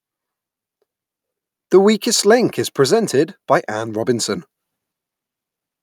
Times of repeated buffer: none

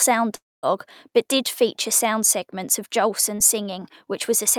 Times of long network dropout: 0.35-0.66

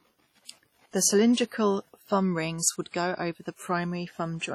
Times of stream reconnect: none

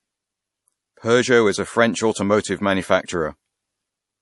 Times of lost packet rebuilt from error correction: none

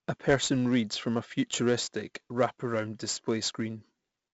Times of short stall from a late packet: none

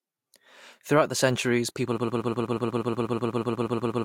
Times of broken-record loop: 1.98-4.04

